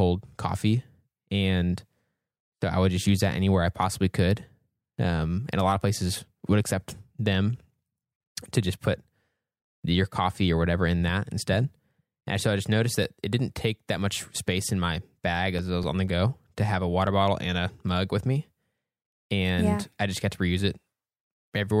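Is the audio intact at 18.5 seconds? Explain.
Yes, the audio is intact at 18.5 seconds, with no dropout, click, distortion or other fault heard at that point in the speech.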